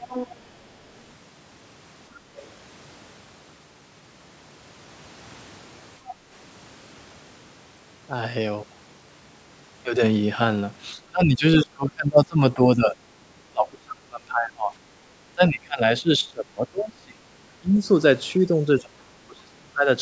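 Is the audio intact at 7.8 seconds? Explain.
Yes, the speech at 7.8 seconds is intact, having passed only through the normal call microphone processing, which trims the deepest bass and leaves nothing above 8 kHz.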